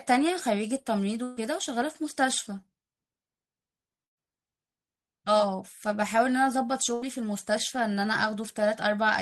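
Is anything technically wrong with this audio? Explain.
Yes. Bursts of packet loss occur at 1.23 to 1.39 s, 4.05 to 4.18 s and 6.94 to 7.04 s, costing about 140, 120 and 80 ms of speech. The receiver extends the last sound, giving a held buzz or fading hiss that in the second burst dies to near silence, then resumes with audio skipped.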